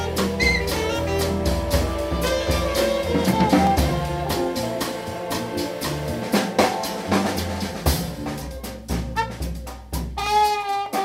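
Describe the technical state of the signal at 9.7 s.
Two clocks likely differ by around 500 ppm, causing clock drift buffer slips of about 15 samples: a click every 0.6 s from 0.67 to 10.86 s.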